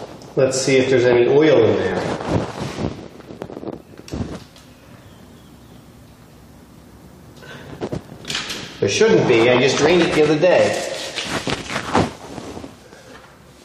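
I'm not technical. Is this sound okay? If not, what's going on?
No. There are two tiny skips, at about 1.92 s and 9.9 s. This is an overlap between stream segments. The audio arrives in chunks of about 4 seconds, and where two chunks' timing overlapped, the player trimmed a sliver of sound that wasn't actually repeated. About 6 and 15 thousandths of a second go missing, so the sound jumps rather than pausing. That's the difference from a dropout, where you'd hear a short silent gap instead of a skip.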